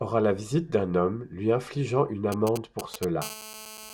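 At 2.32 s, just after "homme lui infligeant une", GSM signalling bursts break in and last until 3.05 s. A nearby 2G phone is sending short groups of radio bursts, as it does while setting up a call or a message, and the audio circuitry rectifies them into sound. The result is a galloping dit-dit-dit of brief 217 Hz buzzes, roughly 10 dB below the speech. Because the bursts arrive in clusters rather than continuously, the interference stutters instead of droning.

From 3.22 s to the end of the audio, a GSM phone buzz takes over. The phone is now transmitting continuously, as in an active call, pulsing 217 times a second, and the rectified pulses produce a hard, raspy tone at 217 Hz, rich in harmonics and about 14 dB below the speech. Unlike the earlier signalling bursts, it holds steady without gaps or galloping rhythm, and it bears no relation to the speech.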